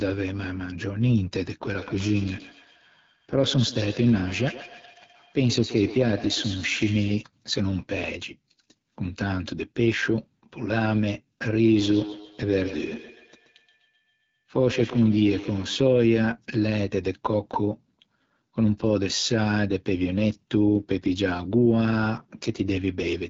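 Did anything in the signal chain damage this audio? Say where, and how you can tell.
Yes. The codec stage did damage: the AMR wideband (HD Voice) codec runs the whole way through. The speech sounds rough and raspy with nothing above about 7.6 kHz. That coarse texture points to one of AMR-WB's lowest modes, around 8.85 kbit/s, where there's too little to model the voice cleanly.

There's also feedback echo between two devices on the call path, from 1.73 to 7.27 s and from 11.68 to 15.86 s. Each word comes back roughly every 150 ms, thinner and ringing, peaking at about 13 dB below the speech. One device's microphone is picking up what the other device's loudspeaker plays and sending it back round, and its echo canceller only removes its own device's playback.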